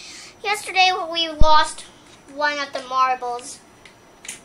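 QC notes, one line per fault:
0.99–1.02 s, corrupt frame decoded: a couple of damaged frames were played anyway, misplacing energy at about -30 dBFS; spectrogram shows a brief vertical block of stray energy.
1.41–1.73 s, phantom power thump: a supply switched on a live input, the step passing through coupling capacitors; waveform shows a low-frequency swing decaying in about 71 ms.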